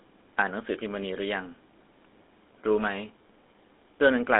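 Throughout, the speech has a buzzy, gravelly roughness and a thin, boxed-in tone, with nothing above about 3.8 kHz and little below 250 Hz. That is GSM full-rate codec damage, consistent with 13 kbps: a vocal-tract model driven by sparse, regular pulses.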